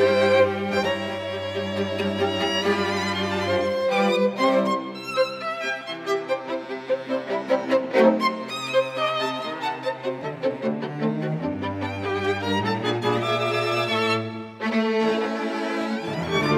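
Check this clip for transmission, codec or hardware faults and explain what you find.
Nothing wrong can be heard anywhere in this clip.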